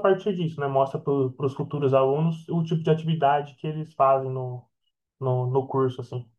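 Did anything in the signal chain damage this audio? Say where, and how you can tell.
No, nothing along the chain from capture to playback has left an audible mark on this speech.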